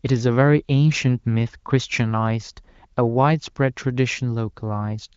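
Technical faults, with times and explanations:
Nothing in this speech clip stands out as a fault, and what you hear is the ordinary sound of AMR wideband (HD Voice) coding at its high 23.05 kbit/s rate, with the top end stopping short of about 7.5 kHz as that codec does.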